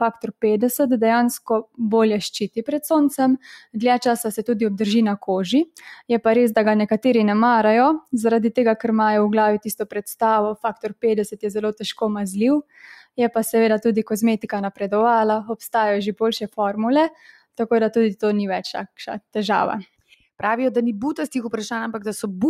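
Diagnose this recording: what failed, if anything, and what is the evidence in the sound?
The failure sits in call processing: a noise suppressor designed for speech was left active on non-speech sound. It treats sustained tones, ambience and reverberant tails as background noise and keeps pulling them down, while transients pass. The level therefore rides up and down by roughly 5 dB throughout, giving a pumping, fluttering quality, with held material sinking and decays thinning out after each attack.

The same suppressor also misjudges specific passages as noise and cuts them far harder than the rest. Clear dips occur at 10.56–11.04 s (about 21 dB down), 12.63–12.78 s (about 20 dB), 17.1–17.59 s (about 15 dB) and 19.85–20.22 s (about 17 dB). In each, steady or fading content drops away abruptly, because the gain reduction bites where the suppressor's noise estimate matches the signal.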